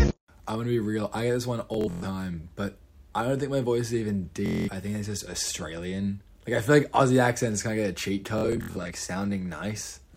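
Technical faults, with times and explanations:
1.74–2.04 s, 4.46–4.69 s, 8.38–8.92 s: Bluetooth stutter. Late packets make the receiver replay short slices, a machine-gun buzz seen as repeating waveform blocks and stripes before the audio jumps ahead.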